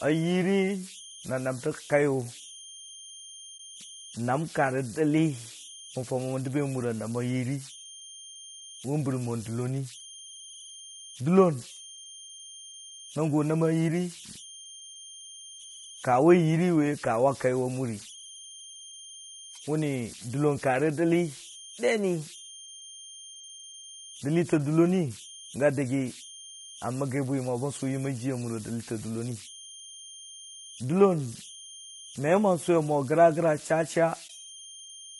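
From start to end, converter idle tones sit about 20 dB below the speech. An undithered delta-sigma converter falls into repeating bit patterns, producing tones around 3 kHz.

Throughout, the speech also sounds rough and grainy, with noise between harmonics and a thin, synthetic top band. This is likely low-delay AAC compression (AAC-ELD), and the damage fits roughly 32 kbps.

At 3.57 to 3.60 s, AAC frame loss with muting leaves a brief 20 ms dip, consistent with one zeroed frame.

At 34.27 to 34.30 s, the same frame loss with muting recurs, fading out and back in over 20 ms.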